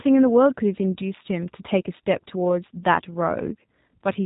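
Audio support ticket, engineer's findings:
Speech band-limited throughout, hard ceiling at 3.8 kHz, consistent with G.729 codec. Spectrogram: empty above 3.8 kHz, formants smeared into blocky 10 ms frames. Mechanism: speech resynthesised from vocal-tract filter, pitch predictor and sparse pulses, which fits an 8 kbit/s codec. Audible roughness, synthetic buzz, plainly audible damage.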